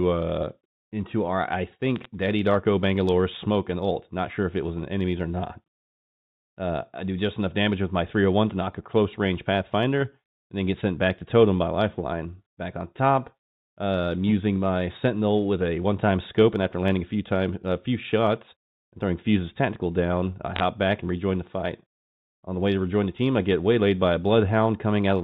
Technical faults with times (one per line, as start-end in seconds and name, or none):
1.96-2.05 bit errors on a digital phone line
20.56-20.63 bit errors on a digital phone line